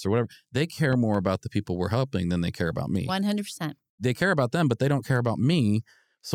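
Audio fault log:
0.93–1.17 s, loud pop: two sharp pops in quick succession land just after "or whatever they" and before "about the people we're", standing about 5 dB above the speech while the speech carries on underneath. This is likely a voltage step or pulse entering the chain, from a plug, switch, static discharge or driver glitch, shaped by the circuits downstream. Unlike a dropout or a clipped burst, nothing of the speech is lost or flattened; the pops simply sit on top.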